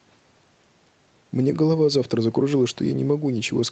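Speech with no audible faults.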